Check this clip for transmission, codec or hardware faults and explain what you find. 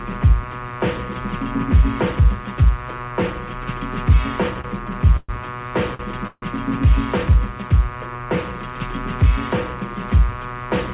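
Two kinds of transmission fault appear, in four events between 4.6 and 6.5 seconds. The audio comes through a call path band-limited to 4 kHz, which fits G.711 mu-law at 64 kbps.

Short stalls from a late packet occur at 4.61 to 4.66 s and 5.95 to 6.01 s. A packet arrived late and the jitter buffer emptied. The receiver stretched the last sound for 28 ms and then 47 ms. The sound is held slightly too long. Nothing is lost.

Call audio freezes occur at 5.17 to 5.31 s and 6.27 to 6.44 s. The likely cause is packets held up in transit, draining the buffer. The last sound is continued and fades for 119 ms and 148 ms, ending in about 20 ms and 40 ms of silence. Playback then resumes where it stopped.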